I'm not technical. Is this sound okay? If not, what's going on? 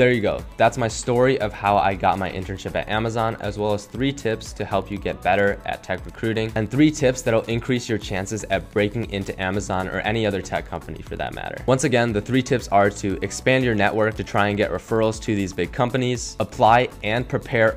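No. Throughout the clip there is Wi-Fi interference: a nearby wireless radio leaks into the audio circuit, giving a faint, steady ticking about ten times a second, once every 102.4 ms. Unlike mains hum, it is an evenly spaced row of ticks, not a continuous buzz.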